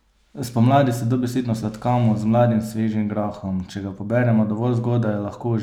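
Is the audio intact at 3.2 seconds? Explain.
No. The converter's sample clock jitters by roughly a microsecond or two throughout the speech, so samples land slightly early or late. This sample clock jitter produces a faint hiss and roughness, about 45 dB below the signal, strongest on loud, bright sounds and gone in pauses.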